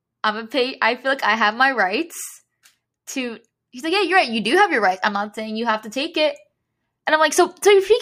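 No technical faults can be heard anywhere in the speech.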